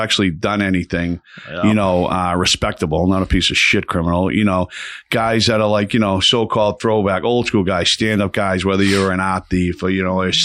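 No audible technical faults.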